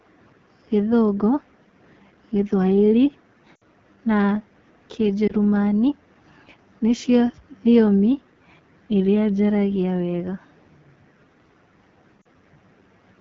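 Throughout the recording, the speech runs through the AMR wideband (HD Voice) codec at a very low rate, which fits 8.85 kbit/s. At that rate, the pulse-excited vocal tract model has too few bits to describe each 20 ms stretch, so the speech band up to 6.4 kHz is coarsely coded and the top band up to 7 kHz is only synthetic noise. The result is a plainly rough, raspy texture on the whole clip.

Three runs of lost AMR speech frames occur where radio errors caused frames to fail their checksum. The decoder then bridged each gap by repeating the last good pitch and vocal tract settings at falling gain. From 3.55 to 3.64 s, about 60 ms (roughly three frames) is concealed, heard as a smeared, fading stretch. From 5.27 to 5.33 s, a single frame of about 20 ms gives a brief dip or warble. From 12.21 to 12.26 s, about 40 ms is lost, producing a short drop toward near silence before the sound returns weak or rough.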